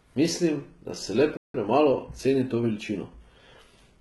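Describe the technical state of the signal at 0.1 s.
At 0.1 s the speech shows HE-AAC compression damage, and it runs through the whole 4 s of the clip. The treble sounds synthetic. Sibilants come out gritty and metallic, with the upper harmonics failing to line up with the lower band. That points to spectral band replication, likely from HE-AAC at a very low bitrate near 16 kbps. Only the lower spectrum is truly coded, and the top is copied up from it under a coarse envelope.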